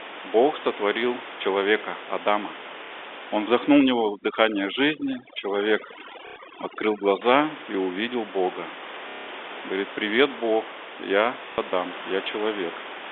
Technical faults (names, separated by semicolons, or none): packet loss with last packet repeated; overdone noise removal